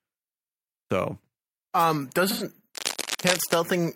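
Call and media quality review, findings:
AAC frame loss with concealment, 2.29 to 2.43 s: a smeared, noisy patch in the speech lasting about 85 ms, which fits two lost frames. The decoder rebuilt them from the last good spectrum. Unlike a plain dropout, there is no silent gap.

Cable scratch noise, 2.75 to 3.54 s: dense, uneven scratching and rustling bursts over the speech, loud, only a few dB under it. The likely cause is a worn cable or connector being moved. It is irregular, not the steady tick of digital crackle.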